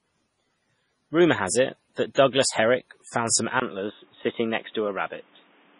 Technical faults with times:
0.00-5.79 MP3 compression
2.14-2.17 pre-echo
3.60-5.79 input switched to a poorer device

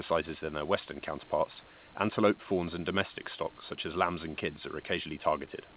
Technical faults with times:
none

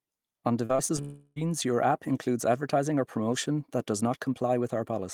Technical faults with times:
0.65-1.00 repeated packet loss (robotic sound)
1.02-1.38 long network dropout

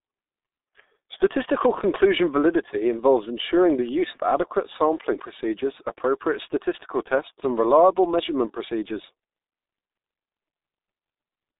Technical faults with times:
0.00-11.59 G.723.1 codec

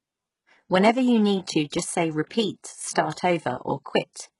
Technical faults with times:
0.00-4.39 HE-AAC compression

